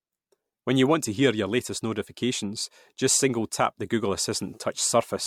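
Throughout the speech, the sound is swirly, smeared and hollow, with softened consonant attacks, and nothing above 19.5 kHz. That is more damage than one 96 kbit/s MP3 pass would leave, which points to generation loss, likely from around five re-encodes whose errors pile up.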